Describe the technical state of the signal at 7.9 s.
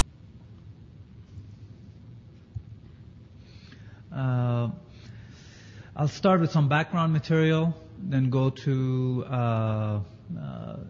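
At 7.9 s the signal is intact, with no audible technical fault at that point.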